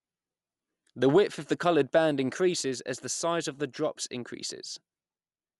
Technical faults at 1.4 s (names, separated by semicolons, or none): Dolby Digital compression